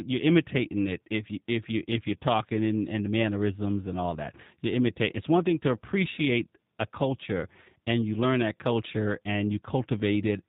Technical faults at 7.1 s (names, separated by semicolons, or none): G.729 codec